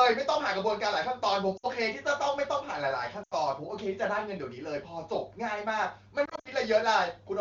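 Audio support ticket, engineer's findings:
Lost AMR speech frames: brief dropouts at 1.58–1.66 s and 3.23–3.34 s, then scattered gaps across 6.25–6.48 s. The decoder is papering over frames that failed their checks, so the sound smears briefly and dips. Wideband path sounds clean.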